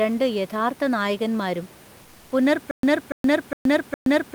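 From 2.01 to 2.31 s the speech pauses, and the room noise, normally about 26 dB under the speech, gets swapped for a flat, featureless hiss about 2 dB quieter. That's comfort noise in place of the background, likely Opus DTX filling the gap with synthetic noise.

From 2.71 s right to the end there's a stutter with silent gaps. The same 288 ms fragment plays four times, each followed by about 122 ms of dead digital silence, so it pulses every 410 ms. That's likely a stalled stream replaying its last chunk, with the missing audio gone.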